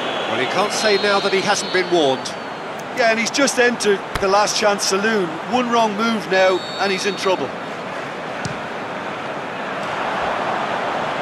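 No technical faults can be heard anywhere in this clip.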